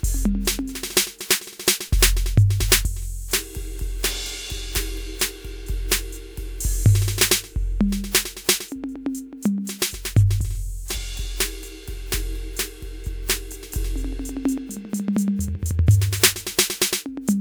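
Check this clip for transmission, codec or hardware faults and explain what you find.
One fault: compressed frames skipped at 10.94 to 10.98 s. The music jumps forward, losing around a fifth of a second, which fits about four frames of roughly 46 ms each going missing or being rejected by the decoder as damaged. Unlike a dropout, there is no silent gap. The music simply resumes further along.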